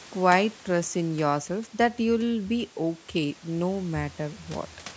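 No faults are audible in this speech; it has the expected call microphone processing, with the lowest bass rolled off and nothing above 8 kHz.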